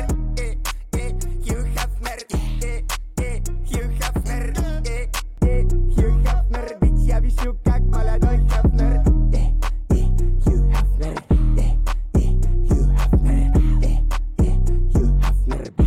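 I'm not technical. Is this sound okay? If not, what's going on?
No. From about 5.38 s to the end, de-emphasis applied wrongly cuts the treble, so the sound turns noticeably dull and muffled, like it's behind a blanket.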